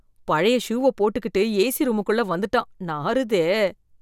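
Listening through the speech, nothing stood out as a technical problem.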